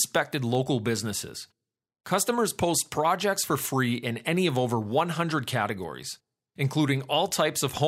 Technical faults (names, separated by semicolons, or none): block of digital silence